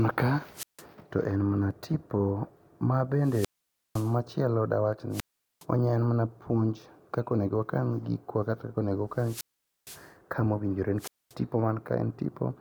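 Speech carrying repeated wireless microphone squelch dropouts at 0.52, 3.19, 5.10, 9.14 and 10.98 s. The radio link fades and the receiver's squelch mutes it: a burst of hiss, then silence lasting 0.16 to 0.51 s, ending before "to en mana tipo" and after "kaka onego".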